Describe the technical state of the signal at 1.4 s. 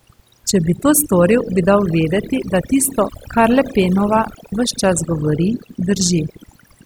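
At 1.4 s the speech carries overdone noise removal, present throughout the clip: bands near the noise estimate are cut away, leaving a lowered background that breaks up into twinkling specks. A spectrogram shows scattered isolated bright dots in dark gaps.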